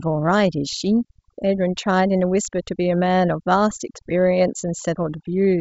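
From start to finish, the speech carries overdone noise removal: a noise reducer set too aggressively cuts individual frequency bands whenever they sit near its noise estimate. The background drops and breaks up into twinkling specks, and quiet speech detail goes with it. The wideband telephone band limit near 7.7 kHz, which fits G.722 coding at 64 kbit/s, adds little audible damage of its own.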